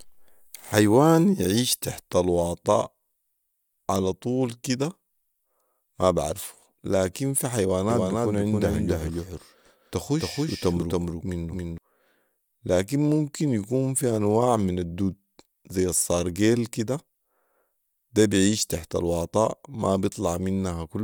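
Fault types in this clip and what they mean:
Doubled audio track: The speech was likely picked up a second time through a slower path, so two copies play out of step. From 7.9 to 11.78 s, a full-band duplicate trails the original by roughly 300 ms at about the same loudness, giving a distinct, dry repeat with no room colour or decay. The second copy appears abruptly at 7.9 s and cuts off just as abruptly at 11.78 s.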